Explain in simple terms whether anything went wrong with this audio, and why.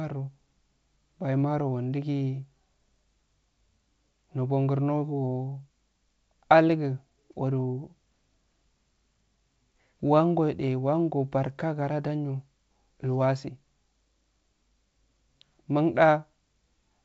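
Nothing went wrong with this audio: the speech comes through its wideband telephone coding just as it should.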